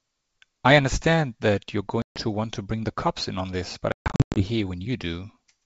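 At 2.02 to 2.21 s, and again in scattered gaps from 3.92 to 4.43 s, the wideband speech suffers packet loss on an ADPCM call. About 140 ms, then 340 ms, drops to hard-edged silence. Unlike a plain dropout, the decoder's predictor and step size lose sync, so speech returns slightly distorted.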